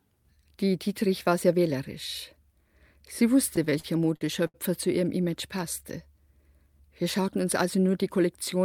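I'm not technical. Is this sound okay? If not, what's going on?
No. Between about 3.47 and 4.56 s, just before "zu ihrem", the speech hits repeated stalls (stutter): eight brief hiccups, the longest 75 ms. The audio arrived late, so playback kept briefly stretching the last sound while waiting. Nothing's lost; it just drags and stumbles.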